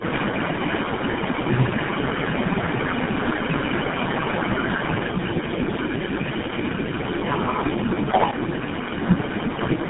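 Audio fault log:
throughout, tandem speech coding: band ends at 3.7 kHz, yet rougher and more warbly than one narrowband codec, since each recoding stage degrades the previous stage's output.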